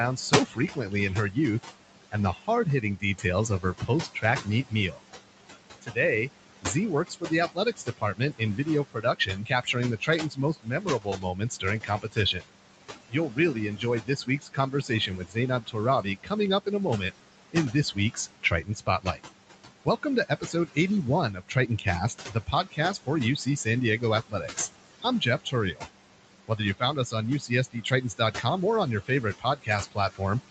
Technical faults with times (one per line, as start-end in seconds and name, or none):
0.00-30.50 noise suppressor artifacts
0.17-30.21 speech cut by the noise suppressor